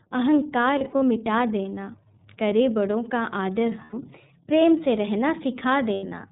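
Speech heard through the iLBC codec: everything above 4 kHz is gone, and the voice has a plainly audible rough, synthetic edge. That texture, rather than a smeared, muffled one, points to a codec that codes each frame on its own, which fits 30 ms frames at a rate near 13 kbps. Lost iLBC frames appear at 0.78–1.03 s, 3.84–3.94 s and 5.94–6.13 s. Unlike a plain dropout, each gap is filled with a held, slightly buzzy vowel-like tone rather than silence. The first gap is broken up into short bursts, while the last holds for about a tenth of a second. Each gap fits roughly three or four missing 30 ms frames, and the voice is right again almost at once afterwards.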